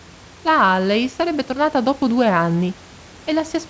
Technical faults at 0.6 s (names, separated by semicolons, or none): none